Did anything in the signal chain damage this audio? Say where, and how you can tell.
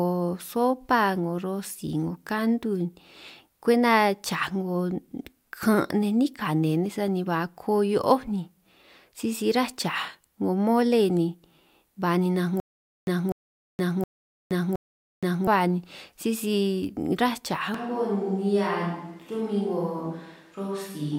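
Yes. Stutter with silent gaps, 12.6 to 15.47 s: a 0.25 s fragment repeats four times every 0.72 s, with 0.47 s silences, before "ba ni sisi ráj". It likely comes from a stalled playback or network buffer.

Switch to a distant microphone at 17.74 s, to the end: the speech turns suddenly roomy and hollow, about 5 dB quieter, with noise about 35 dB below it. This is likely a capture-stage fallback to a farther microphone.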